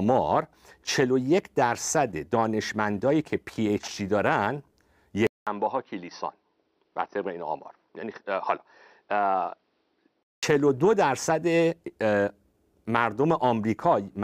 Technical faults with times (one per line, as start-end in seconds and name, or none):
5.27-10.43 input switched to a poorer device